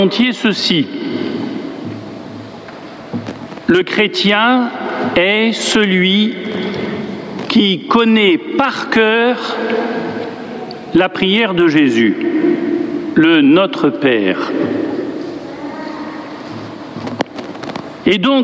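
From start to finish the level pumps, pulled down sharply the moment a loud sound arrives, a swing of around 20 dB. Loud and quiet moments sit unnaturally close in level, giving a squashed, flattened feel. This is gain pumping, likely from input gain set far too high with a fast limiter or compressor clamping down on each peak. The call microphone processing caps the audio at 8 kHz.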